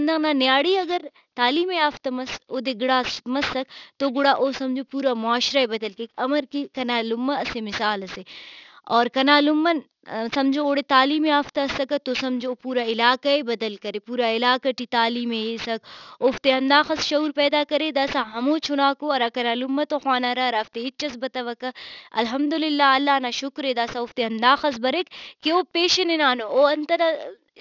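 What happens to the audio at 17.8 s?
At 17.8 s the speech carries aliasing, present through the whole clip. Energy above 6 kHz has folded back below that edge, which fits a drop to a 12 kHz rate without filtering. Sibilants sound gritty and metallic, with spurious tones roughly 20 dB under the signal.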